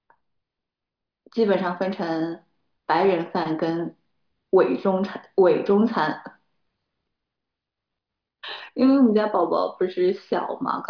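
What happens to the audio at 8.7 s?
Nothing goes wrong at 8.7 s; the speech carries on intact through that moment.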